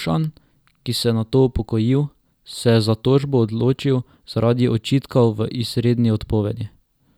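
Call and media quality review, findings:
Single sharp click at 1.42 s in the speech, brief and isolated, a thin vertical line across the spectrum. Likely dropped samples: about one sample missing, so the waveform jumps to a later value. Far too short to remove audible content.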